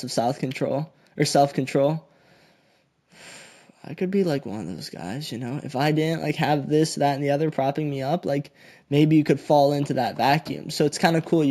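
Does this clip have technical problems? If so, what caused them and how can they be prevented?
Yes. Throughout the speech there is imaging from linear upsampling. A mirrored copy of the content appears between 8 and 16 kHz, roughly 25 dB down, and is heard as metallic shimmer on sibilants, while the top of the original band sounds dulled. This fits a 16 kHz recording raised to 48 kHz by drawing straight lines between samples, which removes too little of the spectral images. Prevent it by resampling with a proper band-limited filter, such as windowed-sinc or polyphase.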